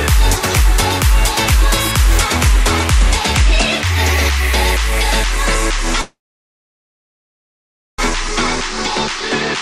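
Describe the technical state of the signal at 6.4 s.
At 6.4 s the signal is inside a call audio freeze running from 6.01 to 8.00 s. The last sound is briefly carried on as a fading tail, then the output sits silent for about 1.84 s of the 1.97 s stretch. Playback then resumes where it left off, with nothing lost but everything afterwards arriving 1.97 s later. This likely comes from packets stalling in transit until the jitter buffer ran dry.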